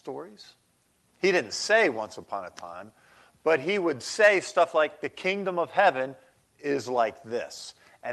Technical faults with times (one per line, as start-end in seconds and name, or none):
0.00-8.12 clock drift between sender and receiver
0.56-7.99 repeated timing corrections